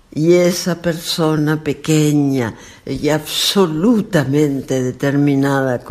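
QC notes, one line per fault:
No faults heard.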